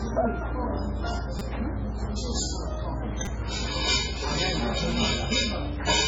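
From the start, everything above about 7.6 kHz is gone, and what's left sounds watery and swirly with smeared attacks. That's heavy MP3 compression, likely from a very low bitrate around 16 kbps, where the encoder drops the treble and weak detail flickers on and off.

At 1.39 to 1.41 s and again at 3.25 to 3.27 s there's a short buzz. That's a repeated buffer, where a tiny slice, which fits a 5 ms buffer, plays four extra times with hard joins. At 4.92 s the same slice repeats just once, heard as a click.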